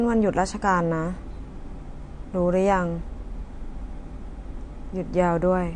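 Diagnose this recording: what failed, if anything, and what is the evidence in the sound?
Codec stage, throughout: the speech stops dead at 9.8 kHz and has a plainly audible watery swirl, likely MP3 compression at a rate fitting about 46 kbps. The encoder cut the treble and let weak frequency lines flicker between frames. A plain low-pass filter would dull the sound without that swirl.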